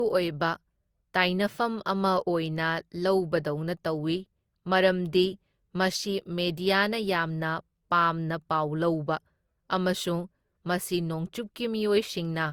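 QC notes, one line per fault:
Throughout, generation loss: the speech sounds swirly, hollow and smeared, with blurred consonant attacks. The likely cause is about four lossy re-encodes, consistent with Opus near 64 kbit/s, each on a shifted frame grid, so quantisation noise accumulates.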